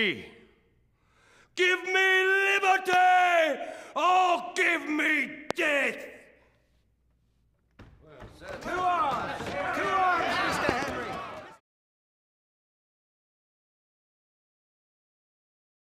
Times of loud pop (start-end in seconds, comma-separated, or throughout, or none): 2.93-2.95, 5.51-5.53, 10.69-10.85